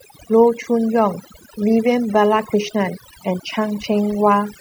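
Overdone noise removal runs through the whole speech clip. An overly aggressive noise reducer has cut away individual frequency bands near its noise estimate, taking softer speech detail with them. Gaps between phrases fall nearly silent with twinkling specks. A spectrogram shows a dark, blotchy background dotted with isolated bright points.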